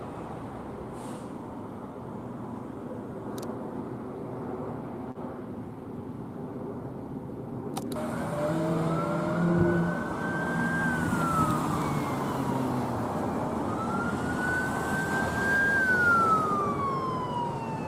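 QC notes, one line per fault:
5.11–5.18 s, short concealed packet loss: about 40 ms never arrived, so the receiver extended the preceding sound to bridge it, leaving a brief smear before blending back.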